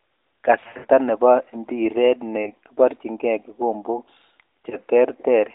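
At 0.64 to 0.86 s there are lost AMR speech frames: about 160 ms scattered over 200 ms, with a longest run of 80 ms. The decoder holds the last pitch and fading gain, so the speech smears and drops. Single lost frames at 2.44 to 2.49 s and 4.70 to 4.76 s each give a brief dip.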